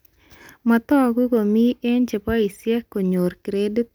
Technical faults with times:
none

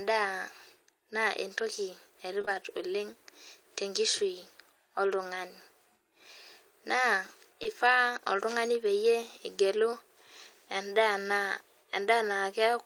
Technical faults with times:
2.41-2.49 short concealed packet loss
7.63-7.67 short concealed packet loss

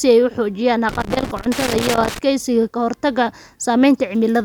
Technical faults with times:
0.89-2.19 loose connector crackle

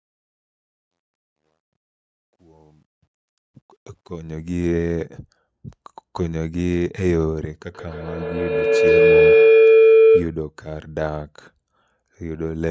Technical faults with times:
0.00-4.76 truncation distortion on a fade
7.70-10.44 feedback howl

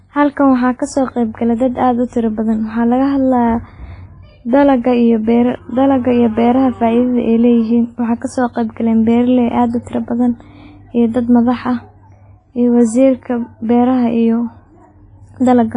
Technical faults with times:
0.00-15.77 WMA compression

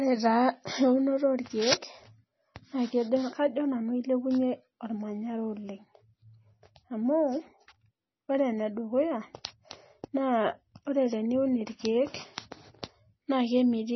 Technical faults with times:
0.00-13.96 MP3 compression

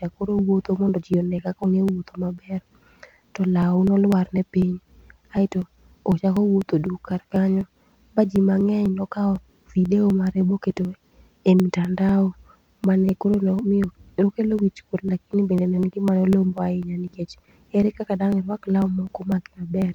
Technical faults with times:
0.14-19.82 periodic USB or driver dropouts

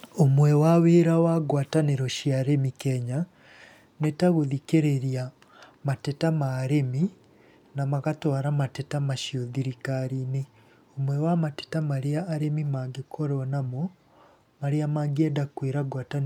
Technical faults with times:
none

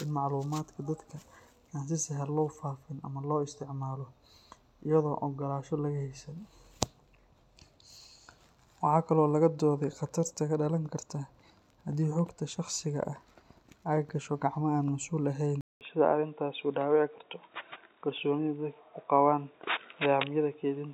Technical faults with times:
15.61-20.93 input switched to a poorer device

